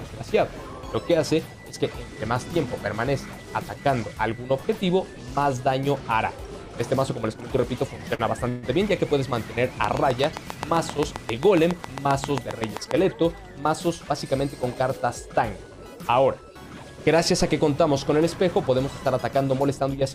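At 8.15 s there is a short stall from a late packet. The jitter buffer ran empty, so the receiver held the last sound for 42 ms until the packet arrived, then resumed from the same point with nothing lost. The sound hangs briefly with a faint buzzy quality. On a spectrogram the harmonics run flat for that stretch. The waveform shows a few repeated periods, and everything afterwards sits 42 ms later.

From 8.49 to 8.65 s comes a call audio freeze, likely caused by packets held up in transit, which emptied the jitter buffer again. For 138 ms the receiver continued the last sound as a buzz that fades but never reaches silence. Then the audio picks up where it stopped, with nothing missing, and the timeline is pushed back a further 138 ms. A spectrogram shows a smeared, frozen band that decays. The waveform shows a repeating pattern that shrinks in amplitude.

Between 9.84 and 12.92 s a train of clicks runs at a steady 7.5 per second, about twenty in all. 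It is likely from interference from nearby equipment or a faulty connection or power supply. Each click has much the same shape and stands roughly 20 dB above the surrounding sound, so it is heard as regular ticking. Spectrograms show evenly spaced thin vertical lines across all frequencies. The waveform shows matching sharp spikes.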